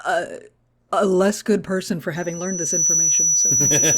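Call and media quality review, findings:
Loudspeaker feedback squeal, 2.16 s to end of clip, right after "less good person for". Single steady tone near 5.9 kHz, swelling over roughly 0.7 s to a few dB above the speech. Probable component: open mic picking up its own loudspeaker, with loop gain above unity at that frequency. Distinct from electrical whine or hum: the tone starts from nothing, builds on its own and sustains instead of sitting at a constant level throughout.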